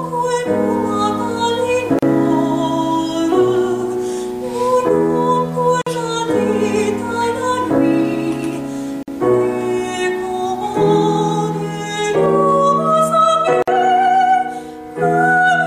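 At 1.99, 5.82, 9.03 and 13.62 s, gaps at joins of encoded pieces leave 37 to 52 ms gaps with smeared edges. Each piece kept its encoder delay and padding.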